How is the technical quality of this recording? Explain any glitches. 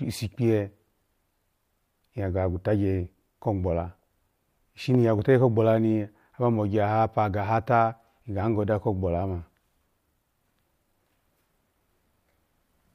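The recording has one fault. Loud pop, 4.95 to 5.21 s: two sharp thumps a few dB over the speech, likely a switch or static voltage spike. The speech continues beneath.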